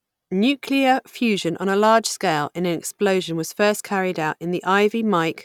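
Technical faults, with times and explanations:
No technical faults can be heard in this speech recording. Nothing stands out at any point that calls for a time or an explanation.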